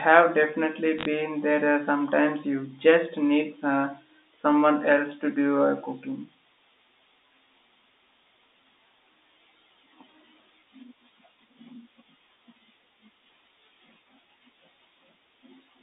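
Speech over a telephone line carries a short burst of bit errors on a digital phone line between 0.99 and 1.05 s. Flipped bits in the G.711 mu-law stream each corrupt a single sample. Hits on the sign or upper bits throw that sample far from its neighbours, so the ear hears a cluster of sharp ticks, a brief crackle over the speech. The damage suggests a few bits in every thousand going wrong across several frames. On a waveform these show as isolated one-sample spikes jutting out of the speech envelope. On a spectrogram they appear as thin vertical broadband lines inside the 250 Hz to 3.7 kHz telephone band.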